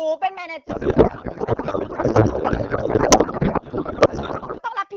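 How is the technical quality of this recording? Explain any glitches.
Poor. From 0.68 to 4.60 s there is a codec payload misread: the AMR frames' bits are unpacked in the wrong layout, likely octet-aligned read as bandwidth-efficient, so speech becomes continuous garbled warble rather than the gaps of packet loss.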